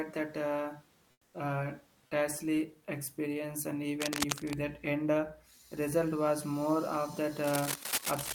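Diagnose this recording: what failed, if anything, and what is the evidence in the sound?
From 1.11 to 1.33 s, just before "uh tasty experience and", the room background gives way to a flat, featureless hiss about 5 dB quieter. This is comfort noise in place of the background, likely from Opus DTX in the codec stage, which stops sending during the pause and lets the receiver synthesise the 220 ms gap.

Dense, uneven scratching and rustling runs from 3.96 to 4.55 s, after "uh tasty experience and", about 5 dB below the speech, and again from 7.44 s to the end, roughly level with it. This cable scratch noise likely comes from the analogue wiring, where a worn cable or connector shifts and its contact resistance jumps around.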